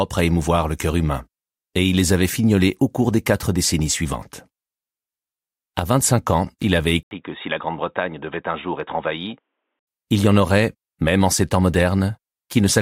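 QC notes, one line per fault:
7.03–9.87 s, input switched to a poorer device: the recording input was likely moved mid-take onto a lower-grade microphone or headset call path, and then back. After a gap of about 80 ms at 7.03 s, the sound turns boxy and dull, with nothing above 3.8 kHz, because the narrower device cuts the top band. The level drops by about 5 dB, and a faint new noise floor, some 55 dB under the signal, appears until full bandwidth returns at 9.87 s.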